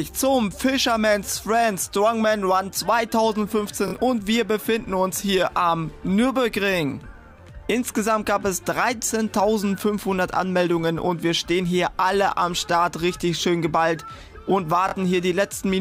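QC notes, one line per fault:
3.88–3.94 s and 14.89–14.95 s, Bluetooth stutter: two short machine-gun buzzes where the receiver kept replaying its last little slice while data was missing, about 46 ms each time (which fits two dropped packets), then the sound jumps ahead as if it had kept playing.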